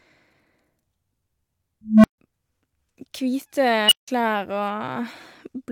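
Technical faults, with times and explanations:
1.85–2.18 s and 3.86–4.08 s, unstable filter: a recursive filter with bad coefficients amplifies its own feedback, so a tone near 200 Hz swells over 186 ms, then one around 3 kHz within 50 ms. Each clips, overflows, and goes silent for 144 ms and 163 ms until the filter resets.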